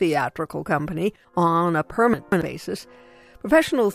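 Around 2.14 to 2.42 s there's a jumbled moment: chunks out of order. A roughly 93 ms chunk turns up two chunks late, so nothing's missing, but the audio is shuffled and you get three hard joins.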